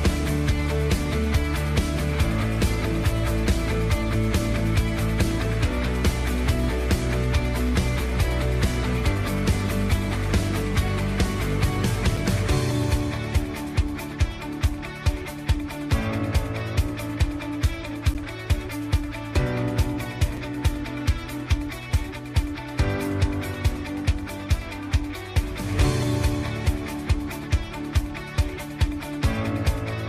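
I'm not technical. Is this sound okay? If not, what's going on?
No. There are two blocks of digital silence, at 18.14 s (10 ms) and 20.37 s (5 ms). Tiny stretches of sound were replaced by pure nothing, and each gap is so short that it comes across as a brief tick or dip rather than a silence.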